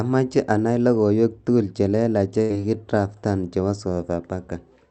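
A burst of packet loss hits this speech recording from 2.41 to 2.52 s. Consecutive packets were lost or arrived too late to play, so the receiver extended and faded the last sound for about 80 ms, and playback resumes with roughly 80 ms of speech skipped.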